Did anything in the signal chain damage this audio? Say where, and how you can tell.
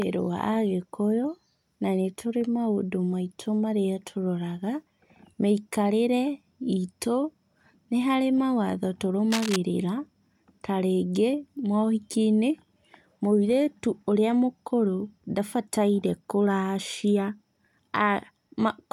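Yes, in the analogue wiring. From 9.30 to 9.56 s, cable scratch noise rasps over the speech, only a few decibels below it. A worn connector being moved is the likely cause, its contact resistance flickering. A spectrogram shows ragged broadband streaks, and the waveform shows dense irregular spikes.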